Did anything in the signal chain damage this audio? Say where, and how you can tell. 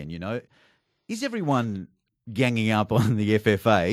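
Yes. From 1.08 s to 3.55 s the speech and the background noise swell together, climbing by about 8 dB. That is automatic gain rising in the call processing stage: the AGC judged the input too quiet and slowly raised its gain.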